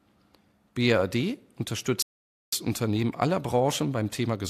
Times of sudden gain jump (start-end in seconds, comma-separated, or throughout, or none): none